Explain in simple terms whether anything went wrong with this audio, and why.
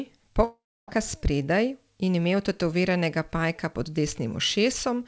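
From 0.44 s to 0.91 s the speech breaks off: the last sound trails on as a fading buzz, then goes silent, and speech resumes with nearly half a second missing. This is likely a long network dropout, with audio lost in transit.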